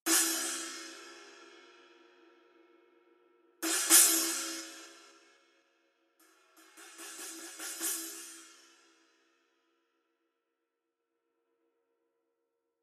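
From 4.48 to 5.64 s there's zipper noise: the level drops by roughly 15 dB, but instead of gliding down it moves in 3 dB jumps, about four a second, with nothing smoothing the transitions. Every jump puts a small click into the waveform, so you hear a ticking, zipper-like texture riding on the sound while the fade happens.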